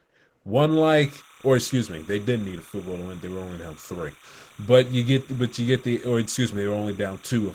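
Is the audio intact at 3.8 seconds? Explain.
No. At 3.8 seconds two faults overlap. The whole clip carries Opus voice compression. The coder is running in its hybrid mode, with linear prediction handling the low band and a transform layer covering everything above 8 kHz. Its excitation is coded coarsely, and the plainly audible damage fits a bitrate around 16 kbps. You can hear it as a slightly hoarse, robotic edge on the speech.

On top of that, timecode bleed runs from 0.71 s right to the end, so 3.8 s sits well inside it. Linear timecode from an adjacent track or cable has leaked in. It is a square wave flipping between tones near 1 and 2 kHz, and its rhythm fits 29.97 fps code. It sits roughly 25 dB under the speech as a steady chirpy warble.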